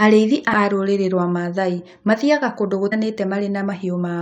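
At 0.52 s and 2.91 s, the speech briefly glitches: damaged data in a compressed stream, where corrupt bytes make the decoder misread frames and resynchronise at the next header. Each blip lasts only about 15 ms.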